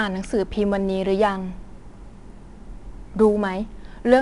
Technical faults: 4-bit ADPCM compression

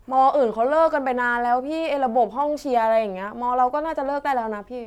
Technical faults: none

